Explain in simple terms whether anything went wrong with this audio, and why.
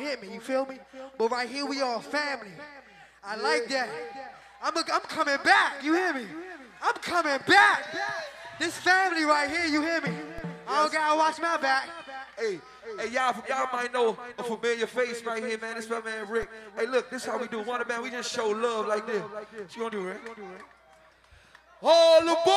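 Twice, at 10.38 and 16.43 seconds, the resting level the signal sits on suddenly jumped. This fault is a DC step. Something in the recording chain shifted the baseline of the waveform, as happens when a converter readjusts itself or an input with a slight offset is switched in. Each jump is heard as a brief low thump, and the shift then fades away gradually. The sound itself carries on unchanged through both moments.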